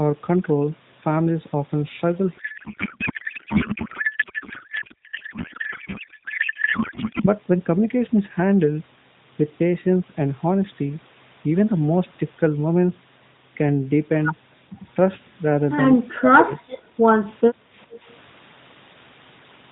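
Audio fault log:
2.38 to 7.27 s, codec payload misread: For nearly five seconds the speech turns into garbled noise and warble. It barely tracks the talker. The AMR frames were packed in octet-aligned form but unpacked as bandwidth-efficient. Every field lands a few bits off, so the decoder builds nonsense from valid-looking frames. The damage stops once both ends agree on the packing again. Then the light, narrowband AMR sound returns, which fits a 12.2 kbps mode.
16.78 to 16.97 s and 17.53 to 17.75 s, background gated by the echo canceller: The room sound dips twice, each time for about a fifth of a second. The deepest drop is about 9 dB. While far-end audio was playing out of the loudspeaker, the echo canceller pulled the microphone level down to block echo. The background goes with it. It comes straight back when the canceller releases.
17.90 to 17.99 s, echo leak: A faint, brief copy of the speech appears, 415 ms behind the original. 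It sits roughly 25 dB below the speech and is only a short scrap. This is likely a loudspeaker on one end whose echo canceller missed part of what its microphone picked up. That residue was sent back down the line.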